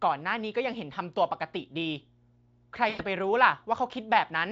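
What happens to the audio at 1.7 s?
At 1.7 s a steady, low, buzzing tone sits beneath the speech, faint and well below the level of the talker. This is mains hum at 60 Hz. It does not begin or end at that moment but runs unchanged through the whole clip. A ground loop or a nearby transformer couples the power line's 60 Hz cycle into the signal path, leaving a constant pitched drone with a few low harmonics.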